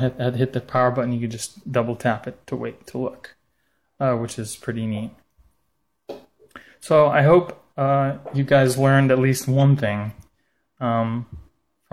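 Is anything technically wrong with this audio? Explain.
No, nothing technically wrong can be heard in this audio. It contains no audible technical faults.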